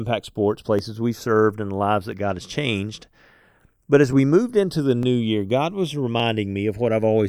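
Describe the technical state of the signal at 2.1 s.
Right at 2.12 s, just after "served and the lives", there's a single sharp click, most likely from dropped samples. About 0.7 ms of audio goes missing, so the waveform jumps straight to a later value. Nothing audible is lost, just that one tick.

Underneath that, the channels are drifting apart, with their clocks off by around 100 ppm. The delay between left and right keeps creeping, reaching about half a millisecond by the end, so in mono you get a slow flanging sweep as the comb notches move.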